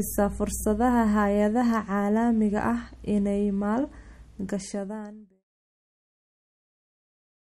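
Across the whole speech clip, the treble stops dead at 14.6 kHz. The damage is plainly audible, likely MP3 compression at a low bitrate around 48 kbps. The smooth fade-out runs from about 4 s to 5.44 s.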